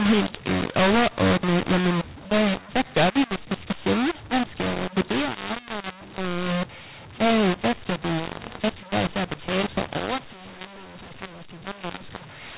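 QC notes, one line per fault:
throughout: mu-law and A-law mixed up. Mu-law telephone coding read back as A-law maps every sample to the wrong level, making the speech harsh and distorted and filling pauses with noise.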